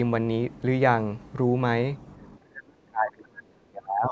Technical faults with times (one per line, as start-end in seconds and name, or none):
2.39-4.11 speech suppressed in double talk